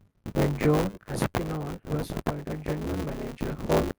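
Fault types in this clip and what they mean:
Buffer tearing: throughout, writer and reader cross inside each buffer, so most of every period replays audio about 20 ms old, causing a 100 Hz robotic buzz on the speech.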